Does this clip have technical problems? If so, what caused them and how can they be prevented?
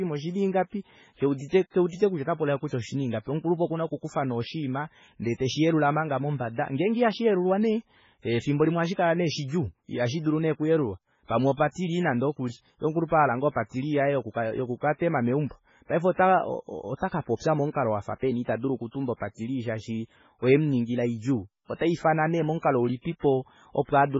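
Yes. Heavy MP3 compression damage runs throughout: the speech sounds watery, treble stops sharply at 7.6 kHz, and weak components flicker, likely from very low-bitrate encoding near 16 kbps. A spectrogram shows a flat ceiling and speckled gaps. Prevent it by encoding at a much higher bitrate or keeping a lossless master.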